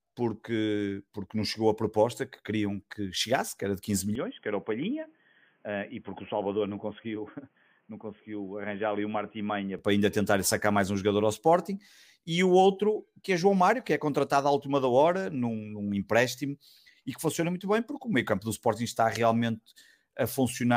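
From 4.15 to 9.79 s the speech turns dull and slightly quieter, cut off above 3.3 kHz. A faint new hiss appears. Likely an input switched to a poorer device, switching just before "para ainda tentar sacar".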